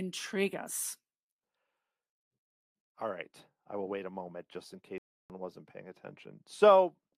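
Speech clip with a playback stall: the audio drops to silence from 4.98 to 5.30 s, about 317 ms, then resumes, likely from the player running out of buffered data.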